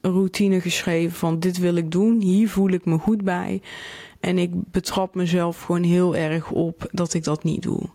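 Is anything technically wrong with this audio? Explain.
Yes, there is gain pumping throughout the clip. The likely cause is input gain set far too high for the microphone, with a fast limiter or compressor clamping down each time the speech gets loud and releasing in the pauses. The level swings by around 10 dB. Loud and quiet passages end up squeezed toward the same level, and the speech sounds flattened and breathing.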